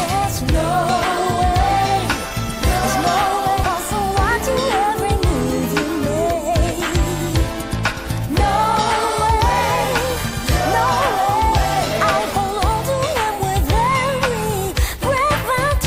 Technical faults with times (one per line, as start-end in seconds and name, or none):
3.63-3.65 skip ahead
5.89-9.39 jitter buffer speed-up